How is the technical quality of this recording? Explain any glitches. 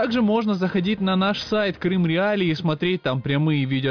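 The technical quality of the recording is sound, with no glitches to explain.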